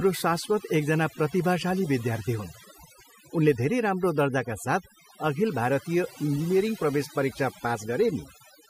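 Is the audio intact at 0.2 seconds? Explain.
No. At 0.2 s the background is near-silent and twinkling, from overdone noise removal running throughout: an overly aggressive reducer switching off bands near its noise estimate.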